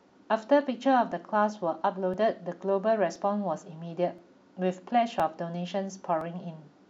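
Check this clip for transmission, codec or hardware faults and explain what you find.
One hardware fault is present. From 0.10 s to 6.21 s, regular ticks land every 1.02 s during the speech: periodic USB or driver dropouts, each briefly skipping roughly 2 ms of audio.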